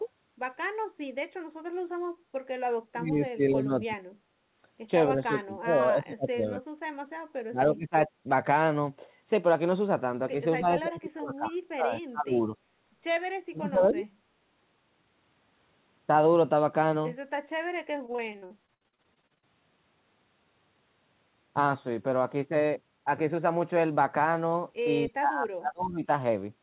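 From 2.92 to 3.97 s the speech sinks sharply, by roughly 25 dB at its deepest, and partly drops out. The same thing happens again at 5.14 to 5.72 s, 5.9 to 6.68 s, 7.48 to 8.1 s, 10.6 to 12.52 s and 13.46 to 14.08 s. It sounds as if the talker is being ducked under an invisible second voice. This is speech suppressed in double talk. The likely cause is an echo canceller that could not tell this talker apart from loudspeaker echo while both ends spoke, so it pulled the whole signal down.

Between 18.06 and 19.44 s the speech turns choppy, with short pieces missing. This is repeated packet loss, with about seventeen separate holes, the longest 66 ms. Each hole was filled by stretching the preceding sound. The patches come so close together that roughly a third of that stretch is synthetic fill rather than real speech.

From 25.07 to 26.08 s, speech suppressed in double talk returns, with the level again dropping by about 30 dB before the clip ends. 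Throughout, nothing is heard above 4 kHz. This narrow, telephone-like band comes from the call path and points to a G.711 A-law codec at 64 kbps.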